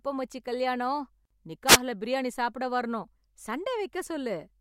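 From 1.67 to 1.77 s, a wireless microphone noise hit: the radio link faded, letting receiver noise through as a brief burst of static just before "பிரியாணி சாப்பிட வரணும்".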